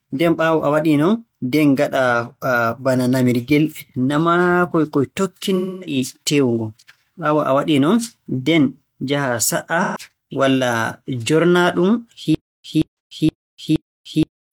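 At 5.56 to 5.96 s and again at 9.82 to 9.99 s, AAC frame loss with concealment replaces 256 ms and then 128 ms of speech with a smeared, noisy patch. The decoder rebuilt these stretches from the last good spectrum. On a spectrogram, harmonics blur into diffuse noise with soft edges. From 12.35 s to the end, a stutter with silent gaps repeats a 175 ms burst four times, every 471 ms, each followed by 296 ms of flat digital silence. The likely cause is a stalling stream replaying its last fragment. The waveform shows identical blocks separated by zero-line gaps. Within this, a further 85 ms concealed loss at 12.91 to 12.99 s adds another brief smeared patch.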